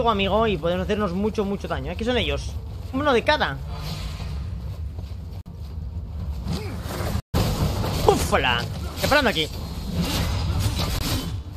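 Corrupt frame muted at 5.41–5.47 s, 7.20–7.36 s and 10.99–11.03 s: abrupt silent holes in the sound, consistent with two, six and one lost frames. Bit errors made the decoder reject those compressed frames, so the player substituted silence while keeping timing intact.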